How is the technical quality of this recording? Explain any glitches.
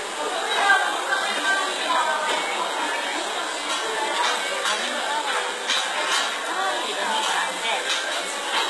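The technical quality is poor, with heavy coding damage across the whole recording. The likely cause is HE-AAC compression, and the degree of damage fits a very low bitrate around 16 kbps. Throughout, the treble is not the original. It is rebuilt by copying lower bands upward under a coarse envelope, so its harmonics fail to line up with those below and bright transients sound gritty and metallic. Nothing sounds above about 11.8 kHz. Unlike a plain low-pass, the top is still bright, only synthetic.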